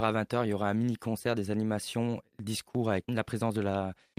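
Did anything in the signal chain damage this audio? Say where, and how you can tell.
No, nothing in the signal chain audibly damaged this speech recording. No stage from capture through to playback leaves any mark that can be heard.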